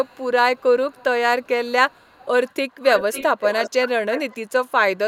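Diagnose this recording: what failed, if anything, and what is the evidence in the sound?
Call processing: an echo canceller likely left loudspeaker pickup in its return signal, causing echo leak. A faint copy of the speech trails by 0.4 s at 0.04–0.25 s and 0.56–1.04 s, then a louder one, about 10 dB down, lags 0.5 s from 1.42 to 4.38 s.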